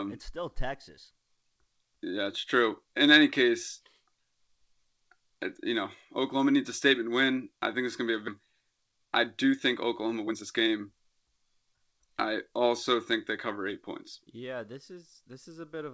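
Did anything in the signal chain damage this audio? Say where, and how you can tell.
Yes. Skip ahead in the network and jitter buffer stage: at 8.28 s about a second of audio vanishes, and the two sides are butted together with no gap. The waveform shows an abrupt splice and the spectrogram a hard vertical seam.

Jitter buffer speed-up, also network and buffer: from 8.39 to 9.52 s (108%) and 10.05 to 12.50 s (111%) the speech sounds hurried at unchanged pitch, as pitch periods are trimmed. Harmonic spacing stays put while syllables visibly compress.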